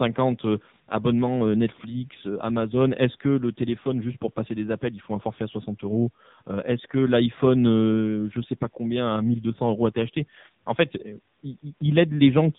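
From the first moment to the last, the speech carries the sound of the AMR narrowband mobile codec, and it's heavily squeezed. Nothing gets through above about 3.8 kHz, so the top end is simply gone and sibilants go dull. The vocal-tract model is working with very few pulses per frame here, which fits a low rate around 6.7 kbps, and you hear it as a buzzy, synthetic edge on every syllable.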